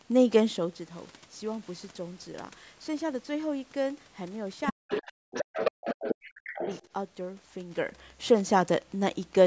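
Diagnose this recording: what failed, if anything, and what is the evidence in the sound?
Other side's voice leaking through appears at 4.65–4.73 s, 4.89–5.12 s and 5.33–6.89 s, a second talker only about 5 dB below the main speech. This is the call-processing stage: the loudspeaker's output reached the microphone and was likely left uncancelled by the echo canceller.

Speech suppressed in double talk occurs at 4.71–5.57 s and 5.84–6.66 s, where the main voice dips by around 40 dB in pieces while the leaked voice is present. With both sides active, the echo suppressor likely attenuated everything it couldn't separate, including the near-end talker.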